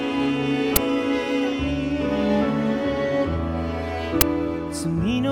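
At 0.76 s and 4.21 s, an uninitialised buffer plays stale memory as audio, giving a roughly 10 ms loud crack, unlike a silent dropout.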